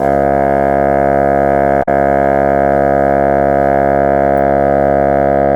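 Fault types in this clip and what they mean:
Damaged data in a compressed stream: corrupted bytes in the encoded music make the decoder misread frames and lose sync until it finds a valid header again. Brief disruptions result at 1.79–1.88 s and 4.35–4.38 s. These show as abrupt short breaks in the spectrogram and waveform.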